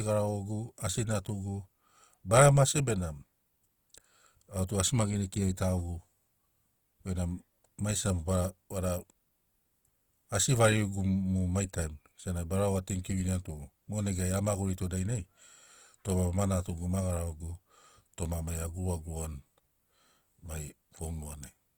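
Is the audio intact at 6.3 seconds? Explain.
No. Across the whole clip, including 6.3 s, likely Opus compression ran short of bits and noise-filled bands, leaving the speech plainly grainy and rough.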